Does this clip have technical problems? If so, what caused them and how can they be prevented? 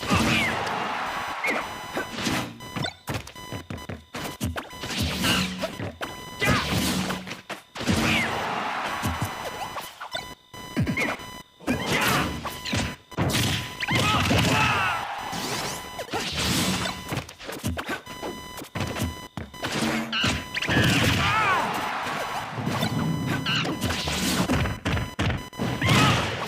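Yes: computer activity noise runs throughout, a buzzing chirp near 1 kHz roughly 15 dB below the signal, from processor load currents shifting the shared audio ground. Prevent it with an isolated external interface or a ground-loop isolator.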